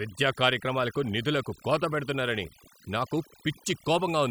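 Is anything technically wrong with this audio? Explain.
Yes. Throughout the speech there is overdone noise removal: a denoiser set too strong pulls individual frequency bands down whenever they sit near its noise estimate, taking quiet voice detail along. The background drops and breaks up into twinkling specks. Unlike a noise gate, which shuts everything at once, the damage here is scattered band by band.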